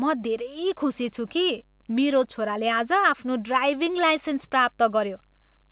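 No faults can be heard anywhere in this speech.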